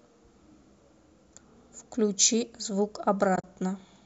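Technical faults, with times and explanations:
3.36 to 3.44 s, AAC frame loss with muting: about 60 ms of audio drops out in short gaps spread across 80 ms, the longest around 40 ms. The decoder zeroes the spectrum of each missing frame, and the overlapping windows fade the level down and back up, so the holes have soft edges. The light grain of the low-delay AAC coding, likely AAC-ELD, continues on either side. The spacing fits roughly 10 ms frames. On a spectrogram these show as narrow vertical blank strips. On the waveform the envelope tapers smoothly into near-silence and back.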